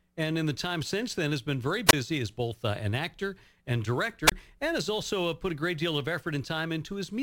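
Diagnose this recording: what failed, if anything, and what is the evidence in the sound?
Sample clock jitter runs through the whole speech clip at the converter stage. A gritty hiss rides on loud, bright syllables and vanishes in pauses. Timing wander of around 5 µs turns waveform slope into error only about 20 dB below the signal.

Wireless microphone squelch dropout occurs at 1.88–1.93 s, after "then has been very", and at 4.26–4.32 s, after "uh an actor and". Static swells, then about 24.5 ms of near silence follows. The analogue FM radio link faded until the receiver's squelch muted its output.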